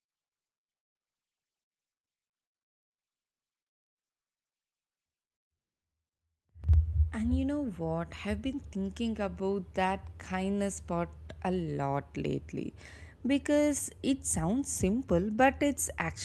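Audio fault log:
5.57–5.83 s, call audio freeze: the sound stops dead for about 240 ms, likely packets stalling and the jitter buffer running dry, then resumes with nothing lost.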